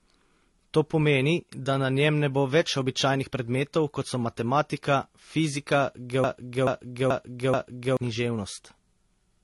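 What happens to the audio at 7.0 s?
At 7.0 s the speech is caught in a stutter. Just after "kot so matematika fizika", a fragment of about 0.43 s starts repeating exactly, back to back, from 6.24 s to 7.97 s, heard four times in a row. The speech that should have filled those 1.7 seconds never arrives. This broken-record loop is likely a stalled player, encoder or stream that kept sending the last chunk it held until it recovered.

The same moment also carries a muffled, smeared texture. Nothing is heard above about 11.6 kHz, and two different kinds of compression artefacts sit on top of each other. This points to transcoding between lossy codecs, likely a low-bitrate MP3 re-encoded to AAC-LC at around 32 kbit/s. The second encoder spends its limited bits reproducing the first one's damage, adds its own, and keeps the lower bandwidth limit.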